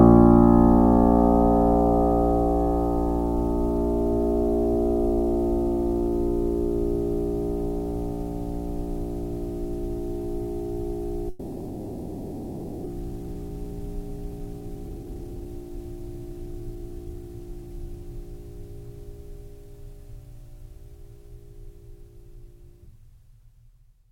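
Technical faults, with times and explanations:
11.29 to 12.88 s, long network dropout: The music gives way to a smeared, fading continuation of the last sound for about 1.6 s, with no silence. About a second of music never returns. This is likely a network outage, with the receiver filling the gap.
12.97 to 18.13 s, jitter buffer speed-up: The music runs about 10% fast at unchanged pitch, and the tempo feels rushed and uneven. After the outage, delayed audio piled up. The receiver trimmed tiny pitch-period slices repeatedly, shedding roughly half a second to catch up.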